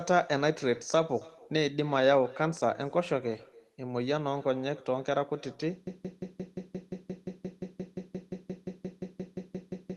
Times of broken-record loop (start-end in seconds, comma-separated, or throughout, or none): 5.87-9.96